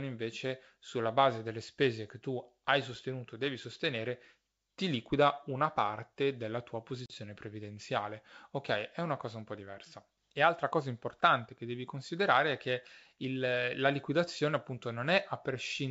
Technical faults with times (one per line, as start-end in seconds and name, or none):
7.06-7.13 packet loss on an ADPCM call